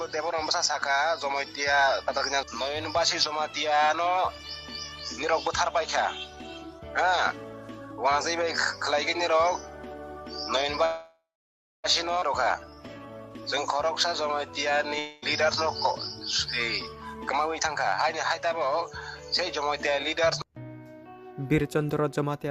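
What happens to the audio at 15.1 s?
A long network dropout likely cut off the incoming stream from 14.99 to 15.24 s. The receiver filled the gap by stretching the last sound into a fading buzz for about 0.23 s. The audio then resumes slightly further on, with the lost portion never played.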